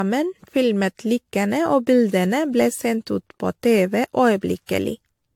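Right through the speech there's a swirly, hollow smear with soft attacks and nothing above 19.3 kHz, likely generation loss from about seven AAC-LC re-encodes at 96 kbit/s.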